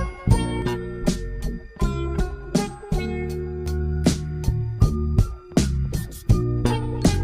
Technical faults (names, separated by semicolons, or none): channel delay (comb filtering)